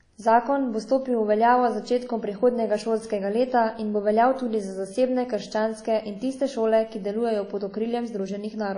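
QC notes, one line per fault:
Throughout, WMA compression: the speech has a ringing, washy quality, with a hiss that swells and recedes along with the signal rather than sitting at a steady level. Nothing remains above 10.1 kHz, so the top end is dulled, and the codec damage is plainly audible. This is likely a transform codec whose quantisation noise spreads over long blocks while weak spectral lines are zeroed, and the damage is consistent with a low bitrate around 32 kbps.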